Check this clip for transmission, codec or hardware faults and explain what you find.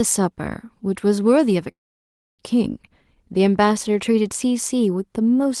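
There is one transmission fault, a call audio freeze, heard through audio band-limited to about 12 kHz, which fits Opus at around 24 kbps. From 1.71 to 2.41 s the speech halts and the gap is held almost entirely as silence, about 0.65 s of it. The likely cause is packets delayed in transit, draining the jitter buffer. The speech then resumes where it stopped, with nothing lost, so everything after arrives about 0.67 s later.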